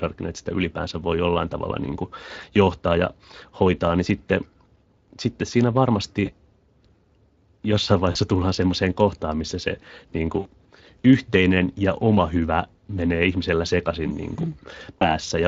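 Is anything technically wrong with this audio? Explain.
Yes, two things. The whole clip has Speex codec damage: the speech sounds hoarse and plainly noisy throughout. The CELP coder has too few bits for the excitation signal, and the level of damage fits a setting of around 20 kbps.

There's also VoIP packet loss concealed by the speech codec, at 6.25–6.31 s (right after "sitten siinä"), 8.11–8.18 s (just before "tullaan semmoiseen kohtaan missä"), 10.39–10.47 s (between "kohtaan missä se niin" and "yhteinen ja oma hyvä") and 15.00–15.16 s. The gaps fit roughly 20 to 60 ms of lost audio. At each one the decoder stretches its last pitch and filter into a sound that fades, and the voice stays weak or distorted briefly afterwards.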